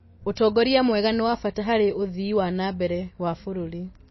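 Throughout the speech, the audio has no content above about 5.8 kHz and carries plainly audible codec damage, most likely MP3 compression at a low rate, consistent with roughly 24 kbps. Short of bits, the encoder cuts the treble at a fixed frequency and discards weak spectral lines, which then switch on and off from frame to frame. The result is a dull, band-limited sound with a watery, swirling texture, metallic chirping on s sounds, and smeared consonant attacks.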